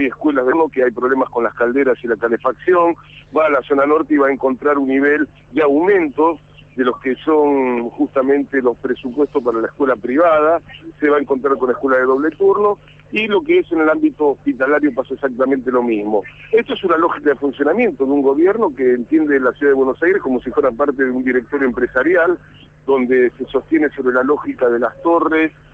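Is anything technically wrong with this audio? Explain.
Yes, there are two faults near the start.

From 0.51 to 0.53 s, the audio jumps abruptly forward with no gap, and roughly seven tenths of a second is missing. This is a skip ahead: that stretch was dropped while later audio was already queued, and the two sides were joined directly.

From 0.61 to 1.53 s, the audio runs about 10% fast at unchanged pitch and sounds hurried. This is a jitter buffer speed-up: to shed excess delay, the receiver repeatedly cut pitch-period-length slices, removing about a tenth of a second in total.

The band-limited sound, with nothing above 8 kHz, fits a call codec in the path.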